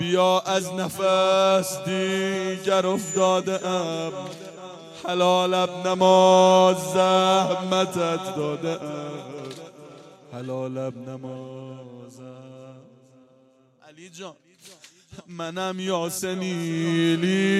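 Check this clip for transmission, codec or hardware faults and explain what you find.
No transmission, codec or hardware faults are audible anywhere in the clip.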